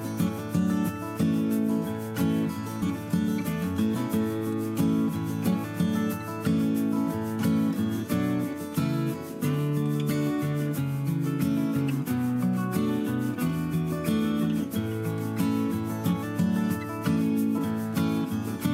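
Around 2.81 s there's a small jump where compressed frames were skipped: a couple of frames simply never got played, so the audio leaps ahead by roughly 50 ms. It happens again at 17.57 s, this time about three frames, so nearer 70 ms lost. The step size fits a frame length of about 26 ms.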